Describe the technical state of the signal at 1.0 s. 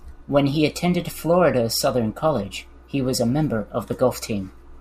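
At 1.0 s the speech signal is intact, with no audible technical fault at that moment.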